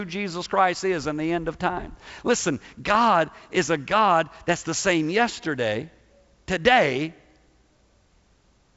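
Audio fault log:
2.95 s, bit errors on an ADPCM link: a sharp pop with a brief rough burst and level jump. Flipped bits, roughly two per thousand, throw the G.722 decoder's step size and predictor off, so the error rings on for several milliseconds before recovering.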